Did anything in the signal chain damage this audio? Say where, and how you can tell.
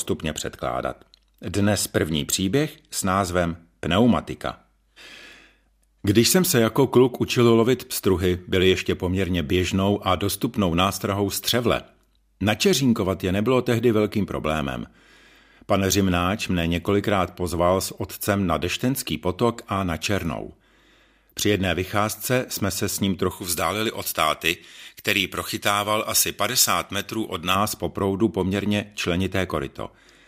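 Yes: pre-emphasis left on from 23.31 to 27.55 s, after "jsme se s ním", until "po proudu poměrně". It's a transmission-stage slip. The J.17 treble boost wasn't undone, so 10 kHz sits about 11 dB hot, and the speech turns thin and hissy.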